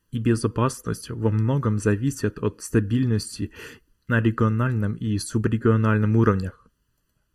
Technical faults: channel delay (comb filtering)

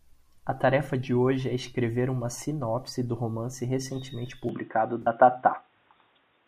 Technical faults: input switched to a poorer device; AAC frame loss with concealment

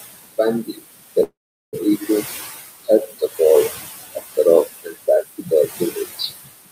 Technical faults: noise suppressor artifacts; speech cut by the noise suppressor; call audio freeze

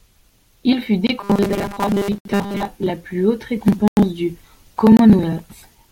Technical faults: block of digital silence; robotic sound from repeated short buffers

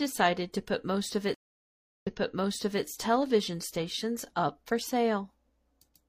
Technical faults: stream reconnect

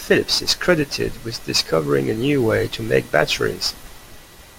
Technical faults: crude rate conversion

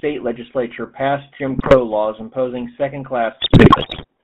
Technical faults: GSM full-rate codec; GSM bit errors

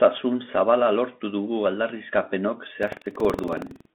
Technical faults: Bluetooth CVSD headset codec; buffer tearing

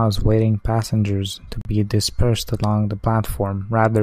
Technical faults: Bluetooth stall

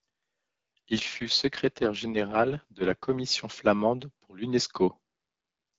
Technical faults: AMR rate drop

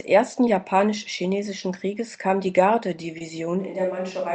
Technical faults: short concealed packet loss; switch to a distant microphone

